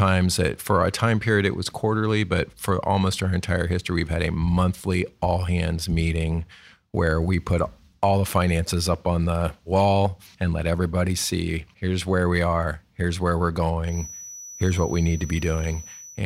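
A speech recording with a feedback whistle starting at 13.82 s and lasting to the end of the clip at 16.25 s: a thin, steady tone near 5.9 kHz sitting roughly 20 dB below the speech, swelling and fading slowly in level. The likely cause is a loudspeaker-to-microphone loop held just at the edge of oscillation. On a spectrogram it shows as a narrow horizontal line at 5.9 kHz, continuous through pauses; the waveform barely changes.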